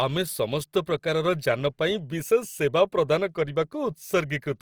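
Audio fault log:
throughout Opus compression. The speech sounds plainly grainy and rough across the full band, likely from music-mode coding filling starved bands with noise, fitting about 24 kbps.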